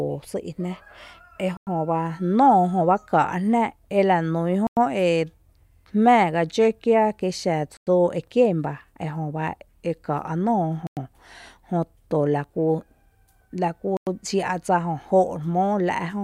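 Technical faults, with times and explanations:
1.57, 4.67, 7.77 (between "kí xa" and "e kien ba"), 10.87 and 13.97 s: gap between chunks. The speech stops for 100 ms with hard edges every 3.1 s, at each 3 s chunk join. Unlike a dropout, nothing is skipped; the speech resumes exactly where it paused.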